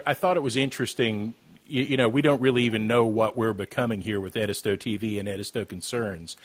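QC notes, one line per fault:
1.35–1.5 s, echo leak: a loudspeaker on the far side has likely let sound past its echo canceller back into the microphone. The result is a very faint copy of the speech trailing it by 208 ms, a brief ghostly repeat well below the main level.
6.06–6.2 s, background gated by the echo canceller: while the loudspeaker played, the canceller pulled the microphone gain down hard to suppress echo. The room tone dips by about 9 dB for around 150 ms, a short hole in the ambience before it returns.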